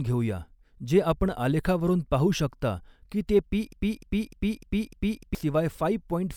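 It's a speech clip, and at 3.73 s it falls into a broken-record loop: a 0.3 s fragment repeats exactly, five times back to back, until 5.35 s. The player or stream likely stalled and kept resending its last chunk, so whatever came in that gap is gone.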